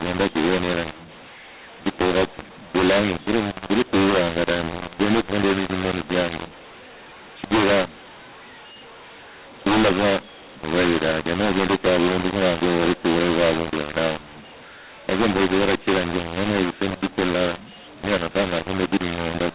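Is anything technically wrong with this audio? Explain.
Yes. Throughout the speech, mu-law and A-law are mixed up: the G.711 A-law stream is decoded as mu-law, scrambling sample levels, so speech sounds harsh and distorted and pauses fill with noise.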